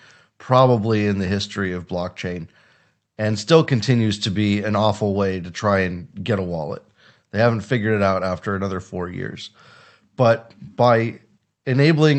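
Nothing in this speech recording stood out as a technical problem on listening.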